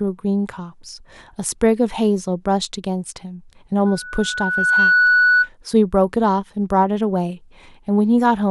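From 3.86 s to 5.49 s a loudspeaker feedback squeal rises over the speech. The microphone is picking up the loudspeaker it feeds, and at 1.5 kHz the loop gain passes one, so that single tone feeds on itself. It swells over about a second until it sits roughly 5 dB above the speech. That gradual self-reinforcing growth at one pitch is what separates it from a steady interference whistle, which would appear at full level immediately.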